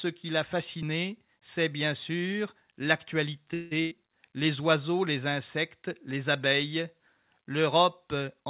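A speech recording heard through a call path with nothing above 4 kHz, which fits narrowband G.711 mu-law at 64 kbps. At 3.54 s the sound stops moving forward and the last sound is held as a fading buzz or hiss until 3.73 s. This is likely a call audio freeze. Packets were delayed in transit, the jitter buffer ran dry, and the receiver filled about 171 ms. Playback then picks up exactly where it left off. Nothing is lost, but everything after arrives 171 ms later. Shortly after, from 3.81 to 3.93 s, comes a burst of packet loss. About 100 ms of audio never arrived in time. The receiver stretched the preceding sound over roughly 97 ms, turning it down as it went, so it fades into a brief buzz or hiss. When the sound returns, it has skipped ahead. The section in between is missing, so the speech jumps rather than pauses.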